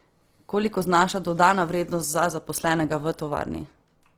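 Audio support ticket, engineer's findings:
Likely Opus encoding in its CELT music mode at a low rate, consistent with around 16 kbps, throughout the speech. Band energies kept, fine detail starved; empty bands refilled by folding or noise. Result: plainly audible Opus compression, grainy, rough, noisy texture on the speech, full bandwidth retained, little swirl.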